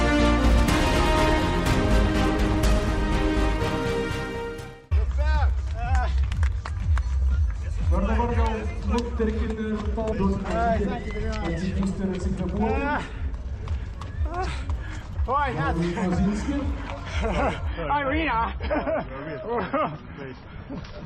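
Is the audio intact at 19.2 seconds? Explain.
No. From 17.68 s to the end, the treble is abruptly gone above 5.9 kHz with no gap. This is an adaptive stream at a lower bitrate, consistent with a switch from 128 to 24 kbit/s MP3.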